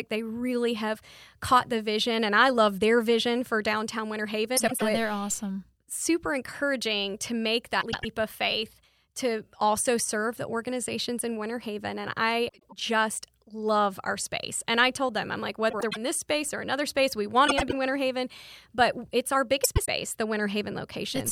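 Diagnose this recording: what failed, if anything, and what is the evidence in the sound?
Frames out of order, from network delivery: six quarter-second stretches at 4.57–4.83 s (just before "yeah they're awesome"), 7.81–8.05 s (between "encouraging to make" and "of faith to also"), 12.48–12.73, 15.70–15.97 (between "told them I'm like" and "this space or another"), 17.47–17.73 and 19.64–19.88 s. Each plays two swapped 104.5 ms halves, heard as a garbled flutter. Unlike packet loss, nothing goes missing and the timing never shortens.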